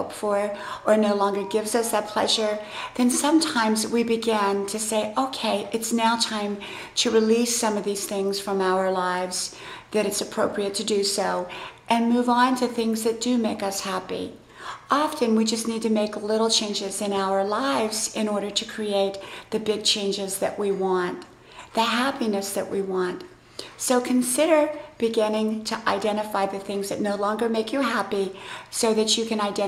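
From 0.10 s to 29.67 s, clock slip clicks form a soft rattle, roughly every 20 ms. Unsynchronised clocks about 1000 ppm apart likely drop or repeat samples.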